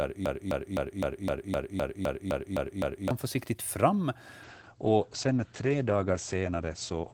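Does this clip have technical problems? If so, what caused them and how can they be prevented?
Yes, there are two faults. From the very start to 3.11 s, the audio is caught in a broken-record loop. A fragment of about 257 ms repeats exactly, back to back, 11 times before normal playback resumes at "försiktigt fram". Whatever should have played in that stretch is lost. The likely cause is a player or stream that stalled and kept re-sending the last buffer it held. On a waveform this shows as identical blocks tiling at a steady 257 ms spacing, and a spectrogram shows the same pattern stamped repeatedly. Preventing it means having the player output silence or concealment when its buffer underruns, never replaying stale data.

After "försiktigt fram", from 4.45 s to the end, there is a call bitrate drop from 48 kbps to 10 kbps. The encoder, given far fewer bits, codes coarsely and cuts the audio bandwidth from 20 kHz to 8 kHz, so the sound turns muffled. 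A spectrogram shows energy above 8 kHz abruptly vanishing at 4.45 s, with smeared, blocky texture below. Stable network capacity, or congestion control that lowers the rate more gradually, helps prevent it.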